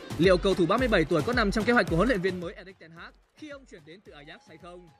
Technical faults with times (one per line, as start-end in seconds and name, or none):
2.14-2.69 zipper noise